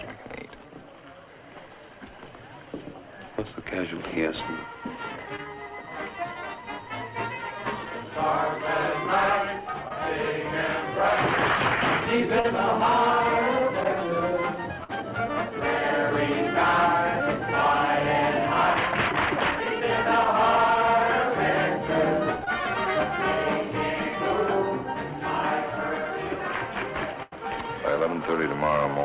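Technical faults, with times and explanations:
5.36–5.40, 9.88–9.92, 12.40–12.46 and 22.45–22.49 s: short concealed packet loss. Each gap of 20 ms (40 ms at 12.40 s) was filled by extending the preceding sound before blending back. This is heard as a brief smear or wobble. On a spectrogram, the harmonics or noise stretch unnaturally flat across the gap, and the waveform repeats one period.
14.84–14.91 and 27.23–27.34 s: burst of packet loss. Consecutive packets were lost, about 40 ms and then 100 ms of audio. The receiver continued the last sound while fading it, giving a held buzz or fading hiss before the audio resumes further on. The waveform shows a repeating, decaying envelope, and the spectrogram shows frozen bands that fade, all below the call path's 4 kHz ceiling.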